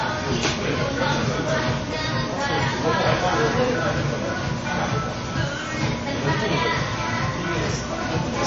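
From start to finish the sound is capped at a hard ceiling of about 7.6 kHz, and what remains below it has a watery, swirling texture, with faint components flickering in and out and transients smeared. This is likely MP3 compression at a very low bitrate, which fits about 32 kbps. The encoder drops weak frequency lines frame by frame. That flickering is what separates it from a simple low-pass filter, which would dull the top end but leave the rest steady.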